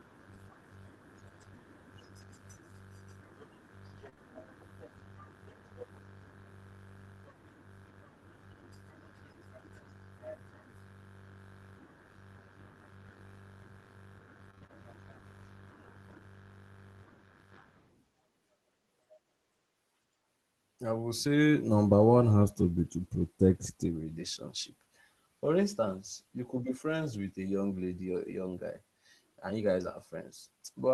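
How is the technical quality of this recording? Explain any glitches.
It's a speech recording that came through an Opus call path, with the top end rolled off around 12 kHz, which fits a 24 kbps stream. There are a handful of network glitches.

Lost packets rebuilt from error correction happen at 2.21 s and again from 3.97 to 4.07 s. The following packets carried rough low-bitrate copies, so there's no gap, just briefly grainier, noisier sound.

Short concealed packet loss follows right after, at 4.09 to 4.14 s and 4.14 to 4.19 s. The decoder extended the previous sound across each missing 20 ms, giving a quick smear or wobble.

Repeated packet loss (robotic sound) shows up from 14.51 to 14.73 s. Four separate dropouts were patched in quick succession, so that stretch turns choppy with pieces missing.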